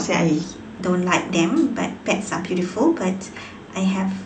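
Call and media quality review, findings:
Wrong sample rate, 0.44 s to end. Voice goes slightly quick and high, about 9% fast, pitch up roughly 1.5 semitones. Probable playback/resampling stage, no conversion. Ratio fits 22 kHz audio played out at 24 kHz.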